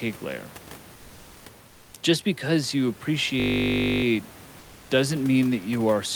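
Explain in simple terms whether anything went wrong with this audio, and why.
Twice in the pauses of this speech, at 0.95 to 1.45 s and again at 1.67 to 1.93 s, the faint room noise behind the talker gives way to a flat, even hiss with no texture, slightly quieter the second time. This is comfort noise in place of the background. The likely cause is the sending side going silent when it detected no speech and the receiving side filling the gap with made-up noise that only roughly matches the real room.

From 3.40 to 4.04 s the sound turns into a steady, mechanical buzz. This is a system hang loop: the computer stalled, but the sound hardware kept replaying the same 20-millisecond slice of audio, 32 times in a row. Repeating such a short piece fifty times a second is what gives it a buzzing hum rather than a stutter.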